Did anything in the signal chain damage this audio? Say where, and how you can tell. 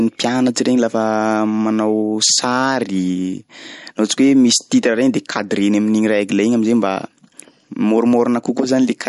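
Yes. MP3 compression runs throughout the speech, likely at the codec stage: nothing reaches above 11.2 kHz, and the damage is plainly audible as a watery swirl. Starved of bits, which points to around 48 kbps, the encoder cut the treble and let weak frequency lines flicker between frames.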